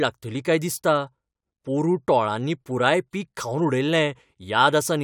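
No technical faults are audible anywhere in the speech.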